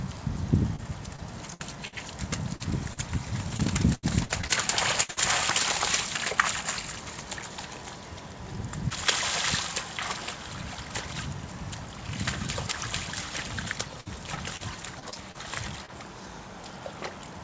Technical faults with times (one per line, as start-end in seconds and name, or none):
0.76-1.94 repeated packet loss (robotic sound)
2.56-5.18 repeated packet loss (robotic sound)
14.00-15.90 repeated packet loss (robotic sound)